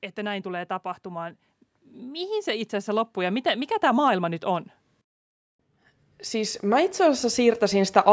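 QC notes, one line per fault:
0.15–4.74 s, automatic gain rising. The level climbs steadily by about 9 dB over roughly four and a half seconds. Speech and background noise swell together. The gain control judged the input too quiet and kept raising its gain.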